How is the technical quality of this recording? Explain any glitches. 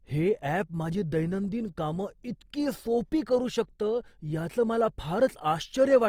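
The recording carries plainly audible compression damage from start to finish. Opus compression runs throughout: the speech sounds rough and grainy rather than swirly, likely because bit-starved bands are refilled with noise or folded lower bands, consistent with Opus music mode near 24 kbps. A spectrogram shows full bandwidth, but the upper bands have a smeared, noisy texture instead of clean harmonics.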